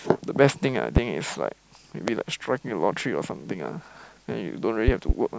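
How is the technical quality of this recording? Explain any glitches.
The speech is marred by loud pops at 0.97 to 1.00 s, 2.08 to 2.11 s, and a double pop from 4.88 to 5.13 s, each around 20 dB above the speech. A voltage pulse, likely from a switch or static discharge, lands as a sharp thump while the speech continues underneath.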